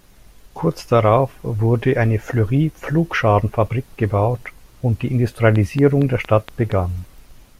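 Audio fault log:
5.56–6.73 s, train of clicks: after "gebaut und die", about seven ticks at a steady 4.3 per second, about 5 dB above the speech, likely interference; evenly spaced, unlike random crackle.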